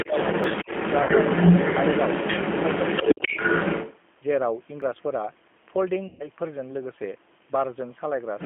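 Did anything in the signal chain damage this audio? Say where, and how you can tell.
Yes. The codec stage is G.729 at 8 kbit/s throughout: the band is confined to about 200 Hz to 3.4 kHz, and the speech sounds plainly rough and synthetic.

In call processing, echo cancellation likely failed, leaking the other side's voice from 0 to 4.0 s, louder than the talker, and again about 5 dB below the talker from 8.39 s to the end.

Double-talk suppression in the same canceller likely ducked the talker: a shallow dip at 0.05–0.13 s and a deep cut from 3.03 to 3.40 s.

A driver or buffer overrun likely discarded audio at 0.44 s (roughly 20 ms) and 4.82 s (roughly 10 ms), heard as the sound skipping ahead.

Network packet loss, concealed by the decoder, left 60 ms at 1.02–1.11 s and 120 ms at 6.07–6.28 s as fading extrapolated sound, with weak audio afterwards.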